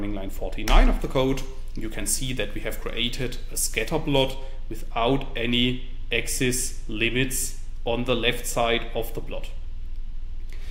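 From 1.00 to 4.31 s, pre-emphasis is left on: the treble lift of the CD 50/15 µs curve went in without its matching de-emphasis. Highs sit about 8 dB hot at 10 kHz relative to 1 kHz, making the sound thin, bright and sibilant.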